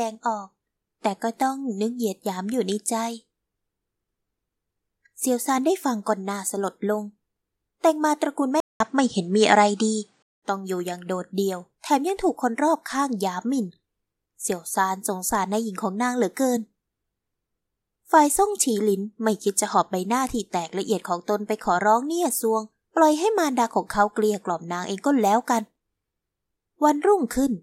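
At 8.60 s the speech drops out for 200 ms. It returns with nothing above 9.8 kHz, a level shift of about 5 dB, and new background noise about 50 dB below the speech. This lasts until 10.42 s. The likely cause is an input switched to a poorer device.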